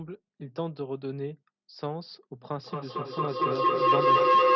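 At 2.57 s a feedback howl begins and runs to the end of the clip. Two devices in the same room share the call. The microphone picks up the loudspeaker, and each trip round that loop adds level. The repeats swell instead of dying away. They narrow to a tone around 1 kHz. Each trip round the loop takes roughly a fifth of a second. At its peak it sits about 12 dB above the speech.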